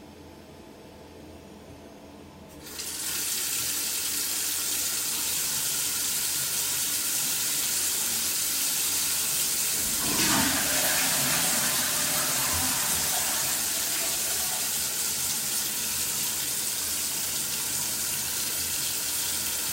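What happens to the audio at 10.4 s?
GSM phone buzz, 8.90–11.76 s: a handset's 217 Hz call bursts, rectified into steady raspy buzz about 19 dB down, harsher than mains hum.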